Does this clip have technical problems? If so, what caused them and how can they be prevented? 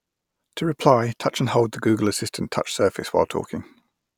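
No, nothing in this speech recording points to a technical fault, so there's no cause to trace and nothing to prevent.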